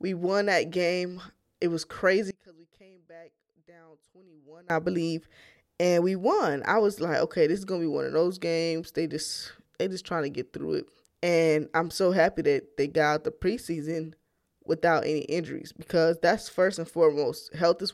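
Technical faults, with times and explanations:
2.31 to 4.70 s, one channel inverted: the speech drops by about 26 dB, leaving only a faint residue until full level returns just before "I believe and we". The likely cause is reversed polarity on one stereo channel, so the centred voice cancels when the two sides are summed to mono. On a waveform the envelope collapses to a narrow band, and a spectrogram shows a darkened stretch.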